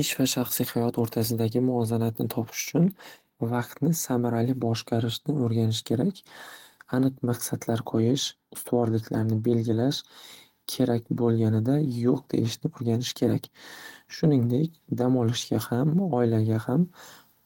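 No technical faults are audible anywhere in this speech recording.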